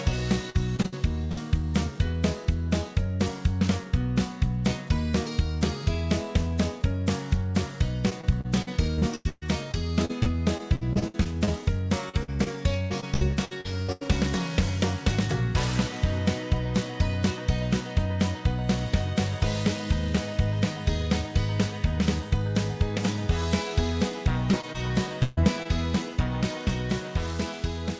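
Choppy, robotic sound with pieces missing at 0.50–1.39 s, 8.10–11.49 s, 12.09–14.09 s and 24.52–25.67 s. This is repeated packet loss: each gap is filled by extending the previous sound, and gaps reach 140 ms.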